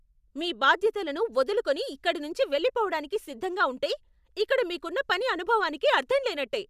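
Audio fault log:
Nothing in the speech stood out as a problem on listening.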